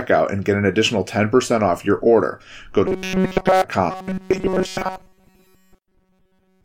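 From 2.87 to 3.65 s, audio likely stopped arriving in time, so the same short buffer was played over and over while the real speech was dropped. That is robotic sound from repeated short buffers: a rigid, metallic buzz near 188 Hz, which fits a loop of roughly 5 ms, that still loosely tracks the speech. Within that stretch, at 3.37 s, a stream segment was likely skipped, and the player jumped to the next piece of the stream. The speech leaps forward with a small blip. From 3.90 s to the end, the same buffer starvation is the likely cause of the robotic sound returning, at the same 188 Hz buzz. This time most but not all of the audio is replaced by repeats, so natural speech breaks through the metallic drone in places.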